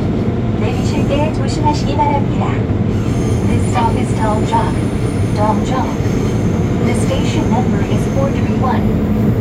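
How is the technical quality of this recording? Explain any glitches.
No glitches or technical faults can be heard here.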